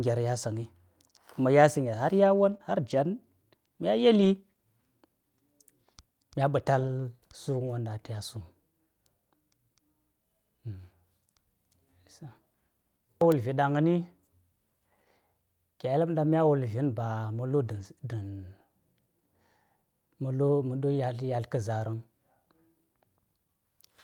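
Brief rough, noisy patches with no actual gap are heard at 2.49–2.55 s, 2.61–2.63 s, 4.21–4.27 s, 6.79–6.89 s, 7.67–7.69 s just before "a taya sum", and 17.67–17.85 s just after "vi̱n ba ma lu̱". This is lost packet rebuilt from error correction: the decoder played the low-bitrate backup copies carried in the following packets, which fill the time but sound coarser. The longest stretch, 0.18 s, fits five separate losses.

Between 2.57 and 2.61 s, wedged into the first cluster, a short smear is heard. This is short concealed packet loss: about 20 ms never arrived in time, so the receiver continued the preceding sound for roughly 15 ms before blending back into the real audio.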